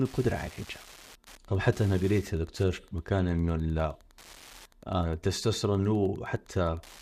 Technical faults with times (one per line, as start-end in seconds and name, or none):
0.00-7.01 Wi-Fi interference